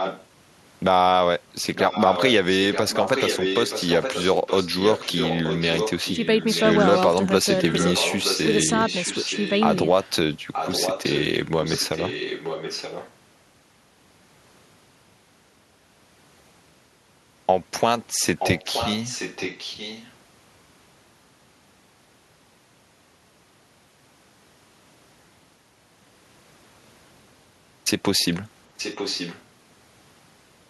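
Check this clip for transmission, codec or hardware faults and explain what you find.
One fault recurs: echo leak. A copy of the speech returns about 0.93 s late, at 0 to 0.26 s, 1.75 to 7.04 s, 7.5 to 10.11 s, 10.53 to 13.13 s, 18.39 to 20.13 s and 28.77 to 29.43 s. Through 7.04 s it sits only about 5 dB below the speech, then about 10 dB below. A far-end loudspeaker likely fed its microphone, and the echo canceller missed it.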